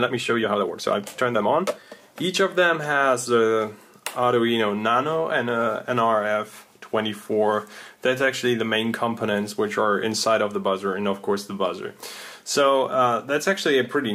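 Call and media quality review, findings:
Time-stretched section, 0.00 to 2.02 s: pace runs about 1.49 times normal, rushed, pitch unchanged. Likely a time-scale stage fitting audio to a length by dropping short pieces. Unlike a sample-rate or playback-speed error, pitch holds steady; the tempo jumps back to normal at 2.02 s instead of staying off throughout.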